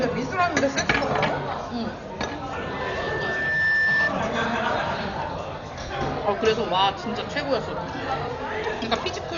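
From start to finish the audio is dull and band-limited, with nothing above about 6.9 kHz, and a rough, fluttering noise hangs around tonal parts. This is heavy codec damage of the kind left by Dolby Digital compression, likely at a low rate that fits about 48 kbps. Starved of bits, the encoder cuts the top of the band and leaves many frequency lines without mantissa data. The decoder then fills those lines with dither noise.

From 2.50 s to 4.13 s a loudspeaker feedback squeal appears as a single tone at 1.8 kHz. It swells over roughly a second and settles at about 5 dB above the rest of the sound before it stops. A microphone was picking up the loudspeaker it fed, and at that frequency the loop gain went past unity. The tone kept reinforcing itself.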